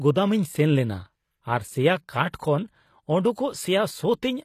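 Speech runs throughout with plainly audible HE-AAC compression damage: the treble sounds synthetic, with s sounds turning gritty and lispy where harmonics fail to line up, and nothing above 14.9 kHz. This is likely spectral band replication, and its coarseness fits roughly 24 kbps.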